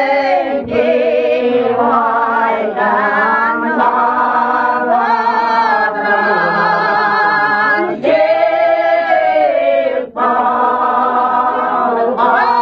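At 5.76 s the adaptive stream switches to a lower bitrate, fitting HE-AAC near 20 kbit/s. Treble above 14.8 kHz vanishes abruptly, without a gap.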